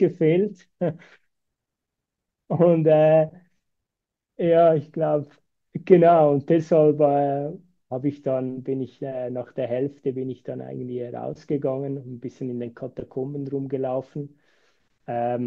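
Speech recording; no technical faults detected anywhere in the clip.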